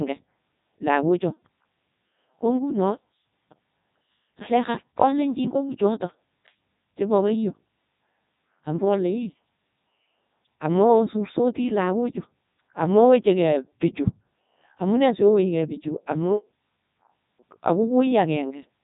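From start to finish, the speech carries heavy Codec 2 vocoder damage. The waveform itself is gone. Only pitch, voicing, energy and a spectral outline survive, rebuilt from sine waves. The result sounds robotic and buzzy, with nothing above 3.8 kHz. This fits the 3.2 kbit/s mode.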